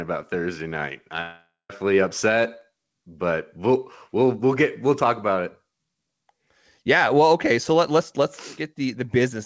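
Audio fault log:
1.21–1.70 s, long network dropout: about half a second of audio is likely lost in transit before "upset but we'll we'll". The receiver stretches the last sound into a decaying buzz, shown as smeared, fading bands under the 8 kHz call ceiling, ending in 0.16 s of flat waveform.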